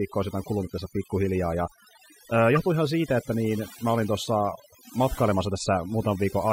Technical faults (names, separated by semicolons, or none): overdone noise removal; corrupt frame decoded